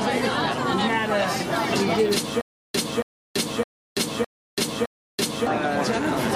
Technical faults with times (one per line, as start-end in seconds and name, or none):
2.41-5.47 stutter with silent gaps